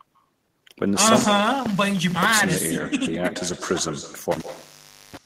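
Throughout the speech, echo with no canceller returns each syllable roughly 150 ms later, about 12 dB down, appearing on a spectrogram as faint, delayed duplicate harmonic traces. From 1.07 to 2.39 s and again from 4.32 to 5.17 s, an intermittent contact opens the line for about 990 ms and 720 ms, cutting sound to low hiss with crackle at the edges; the waveform collapses to near-flat between sharp spikes.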